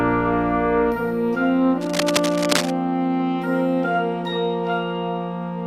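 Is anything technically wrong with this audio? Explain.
Yes. From 1.81 to 2.73 s, a dense, uneven scratching and rustling sits over the audio, only a little quieter than the sound itself, so it is plainly audible. This is cable scratch noise. The likely cause is a worn cable, connector or control being moved: its contact resistance jumps around rapidly, and those fluctuations turn into irregular bursts of noise riding on the signal for just under a second.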